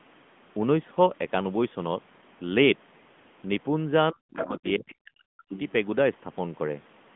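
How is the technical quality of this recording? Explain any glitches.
Technical quality is limited by a mobile-network codec throughout, plus two brief intrusions of a second voice.

AMR narrowband mobile codec runs the whole clip. The speech passes only roughly 150 Hz to 3.5 kHz, with nothing above 3.6 kHz, and has a plainly audible buzzy, synthetic edge from the vocal-tract model. That degree of damage fits a mid-rate mode around 10.2 kbps.

Other side's voice leaking through appears at 4.36 to 4.47 s and 5.53 to 5.72 s as short fragments of another voice, roughly 10 dB and 15 dB below the main speech. The likely cause is far-end loudspeaker sound that the echo canceller failed to fully remove.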